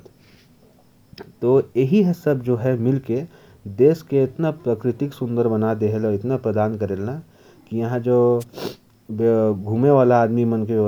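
At 8.40 to 8.44 s a wireless microphone noise hit: the FM link fades briefly, so receiver static swishes over the speech, unlike a digital dropout's silence.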